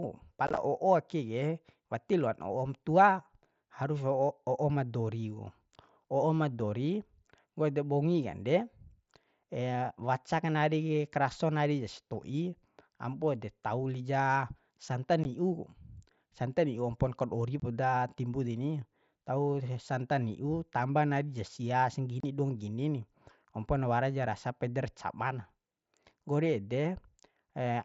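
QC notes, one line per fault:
0.47–0.58 s, 15.24 s, 17.60–17.62 s, 22.20–22.24 s, unconcealed Bluetooth headset packet loss: abrupt, hard-edged holes in the speech. The first is a chopped stutter, about 52 ms missing in gaps up to 15 ms across 105 ms, and the rest are single 15 to 30 ms holes. Voice packets from the headset were lost and silence or an idle pattern filled their place, consistent with roughly 7.5 ms packets.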